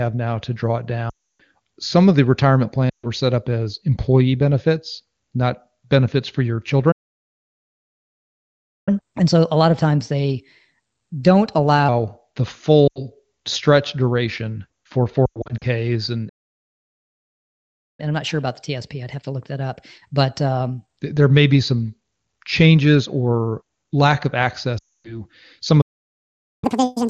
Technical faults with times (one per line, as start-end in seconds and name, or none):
1.09-1.41 lost AMR speech frames
2.90-3.06 lost AMR speech frames
6.91-8.89 playback stall
8.89-11.89 catch-up at higher speed
12.88-13.02 lost AMR speech frames
15.26-15.65 lost AMR speech frames
16.28-18.00 playback stall
18.00-21.00 catch-up at higher speed
24.78-25.18 lost AMR speech frames
25.81-26.64 playback stall
26.64-27.10 catch-up at higher speed